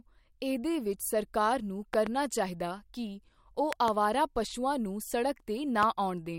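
Sharp loud pops cut through the speech, which carries on underneath: a double pop from 1.94 to 2.09 s about 15 dB above the signal, another from 3.73 to 3.90 s nearer 20 dB, and a single one at 5.83 s. Likely voltage pulses, from a switch, plug or static discharge.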